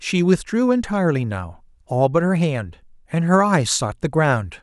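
No technical faults can be heard anywhere in this short speech recording, so there are no times or causes to report.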